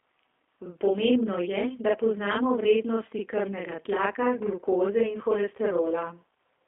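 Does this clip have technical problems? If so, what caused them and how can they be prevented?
Yes, there are two faults, both present for the whole clip.

Throughout, every syllable is followed closely by a second copy at the same loudness, about 40 ms behind, which is heard as a doubling rather than a distinct echo. This is channel delay (doubling): one channel of the recording arrives 40 ms late, and when the two channels are summed to mono the late copy sits on top of the original. To prevent it, align or resynchronise the channels before any mono fold-down.

The speech also sounds narrow, rough and slightly synthetic, with nothing below about 300 Hz or above about 3.5 kHz. This is G.729 codec damage, consistent with the G.729A variant at a very low rate. The sound fits an 8 kbit/s VoIP link, where speech is rebuilt from a coarse filter-and-pulse model on a telephone band. To prevent it, record locally or use a wideband, higher-bitrate codec.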